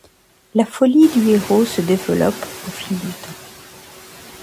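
A noise suppressor runs on this speech throughout, pulling down the bands it judges to be steady noise by about 11 dB frame by frame, so the background sinks between words and rises under them. When the room noise jumps by about 14 dB at around one second, to about 18 dB below the speech, the noise suppressor is caught catching up: its noise estimate lags, so from 1.01 s to 2.09 s the louder noise passes with only about 4 dB of reduction before sinking as the estimate adapts over those 1080 ms.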